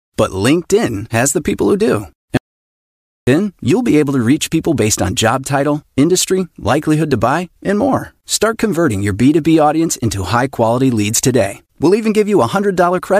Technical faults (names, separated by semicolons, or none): audio dropout to silence